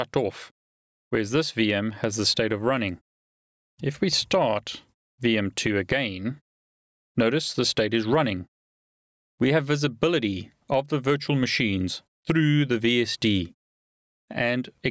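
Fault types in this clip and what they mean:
gain pumping: The level keeps breathing throughout, with the gain swinging by around 10 dB, so everything feels squashed together. Likely the input gain is set way too high and a fast limiter keeps yanking it down.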